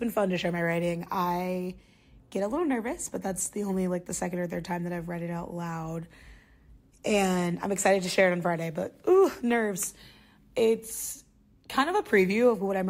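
No technical faults are audible anywhere in the speech recording.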